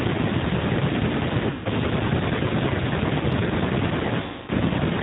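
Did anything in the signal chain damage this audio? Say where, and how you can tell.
Yes. G.729 codec, throughout, at the codec stage: the speech is band-limited to 4 kHz and sounds rough and synthetic, plainly audible coding damage from rebuilding each frame out of a few pulses at 8 kbit/s.

VoIP packet loss concealed by the speech codec, at the network stage, at 1.51 to 1.69 s and 4.22 to 4.50 s. Roughly 140 ms and 260 ms are missing, which fits runs of 20 ms packets. The decoder stretches its last pitch and filter into a fading buzzy tone or coloured noise, and the speech stays weak briefly afterwards.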